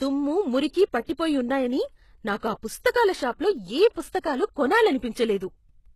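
Throughout the speech, the sound has a gritty, metallic treble that points to low-bitrate HE-AAC compression, likely around 16 kbps. The upper band is rebuilt from copied lower bands rather than coded, and a spectrogram shows smeared, blocky high-frequency texture.

At 0.54 s, 1.51 s and 3.57 s (the last right after "నాకు ఆ పుస్తకాల షాప్లో"), a single sharp click is heard, likely from dropped samples, a few lost so the waveform steps abruptly. Each shows as a thin vertical line across the spectrogram.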